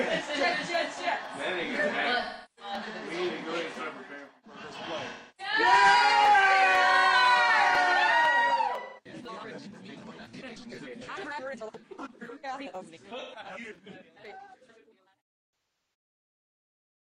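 AAC frame loss with concealment occurs at 2.23–2.72 s, 5.08–5.53 s, 8.80–9.08 s, 13.19–13.39 s and 15.51–15.94 s. The last is scattered bursts. The decoder patches missing frames from the last good spectrum. Each patch sounds smeared, noisy or phasey.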